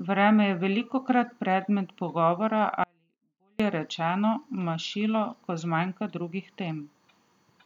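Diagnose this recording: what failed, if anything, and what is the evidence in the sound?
The speech suffers an audio dropout to a faint residue from 2.84 s to 3.60 s, roughly 0.76 s lost. Both edges are abrupt, unlike a pause or a fade, and the gap holds faint sound about 40 dB down rather than true digital silence. That residue points to the analogue wiring stage, most likely an intermittent connection that briefly broke the main signal while the input stayed live, instead of a buffer or network gap.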